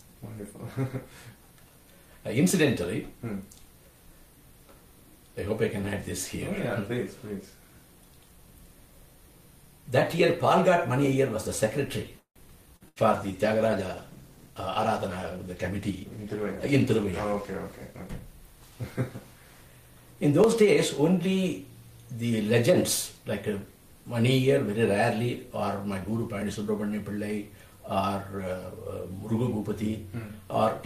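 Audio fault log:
2.50, 8.48, 20.44, 26.42 s, audio missing between chunks: roughly 20 ms vanishes about every 6 s, likely at chunk boundaries, leaving a skip and a hard vertical splice in the waveform.
12.19–12.39 s, call audio freeze: the last sound hangs and fades into about 100 ms of silence, likely from delayed packets. Around 165 ms is inserted, nothing is lost, and the spectrogram shows a fading smear then a blank.
12.76–12.83 s, short concealed packet loss: 40 ms never arrived and was patched by extending the previous sound, visible as a brief smeared band.
12.88–12.99 s, burst of packet loss: 80 ms is missing, filled with a decaying continuation of the last sound. The waveform tapers, then resumes later in the material with a jump.
13.13–18.16 s, call bitrate drop: the encoder fell from 48 to 16 kbps for about 5 s. The sound turns rough and watery, and the spectrogram shows coarser, patchier upper detail.
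17.25–19.11 s, jitter buffer speed-up: the audio runs at 106% speed with pitch unchanged while about 100 ms of pitch periods are cut, sounding hurried. The waveform shows whole cycles dropped.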